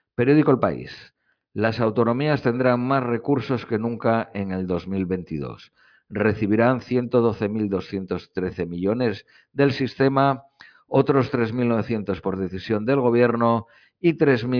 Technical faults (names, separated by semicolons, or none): none